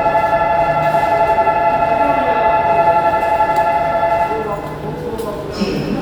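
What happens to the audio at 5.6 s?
Nothing goes wrong at 5.6 s; the sound carries on intact through that moment with no audible fault.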